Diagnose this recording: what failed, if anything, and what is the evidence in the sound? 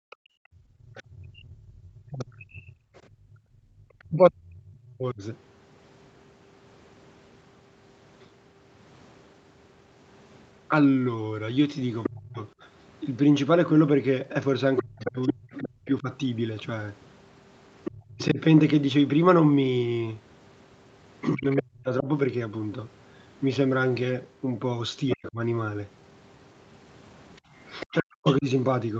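Background gated by the echo canceller, call-processing stage: room sound drops by about 37 dB within 0.0–3.75 s and about 15 dB at 27.41–27.52 s, as suppression clamps the microphone during loudspeaker playback.

Other side's voice leaking through, call processing: a second, far-end voice is audible at 0.1–2.24 s (about −25 dB), 12.03–17.98 s (about −5 dB), 21.52–21.61 s (about −20 dB), and 25.09–28.34 s (about −15 dB). The likely cause is incomplete echo cancellation.

Speech suppressed in double talk, call processing: the talker dips by about 35–40 dB in pieces across 1.04–5.22 s, 12.09–22.08 s and 25.16–28.46 s, likely where both sides overlap and the canceller attenuates everything.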